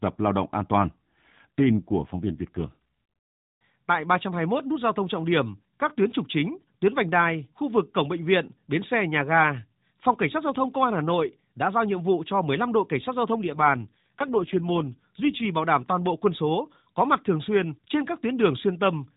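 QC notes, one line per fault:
1.30–2.68 s: AMR rate drop. The speech turns rougher and buzzier within the same 4 kHz narrowband, with no gap, which fits the mobile codec falling from 12.2 to 5.9 kbps.
13.38–15.46 s: AMR rate drop. The same synthetic roughness returns for about 2 s, as fewer bits describe each frame, before clearing when the rate climbs back.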